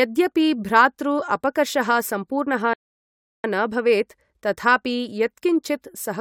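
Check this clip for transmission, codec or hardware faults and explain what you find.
One fault is present, a rebuffering stall. From 2.74 to 3.44 s the speech halts in silence for 0.71 s, because the player used up its downloaded audio and waited for more. It then picks up exactly where it stopped. Unlike a dropout or packet loss, nothing is skipped. The stall only adds time.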